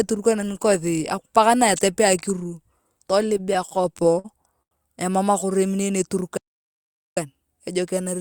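From 3.37 to 4.26 s, packets kept arriving late and the jitter buffer ran dry ten times, producing repeated stalls (stutter): the speech drags, with held fragments up to 53 ms filling about 16% of that stretch. At 4.62 s a single packet came 88 ms late, a short stall from a late packet, so one sound is held too long until 4.73 s. From 6.37 to 7.17 s the output goes silent for about 0.79 s mid-flow, a playback stall, likely from the player running out of data.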